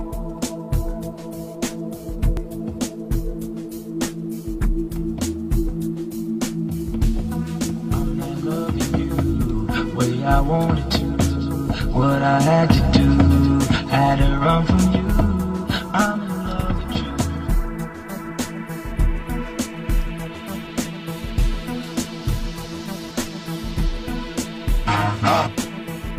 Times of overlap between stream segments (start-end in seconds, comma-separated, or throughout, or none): 2.37-2.41, 14.38-14.41, 20.36-20.39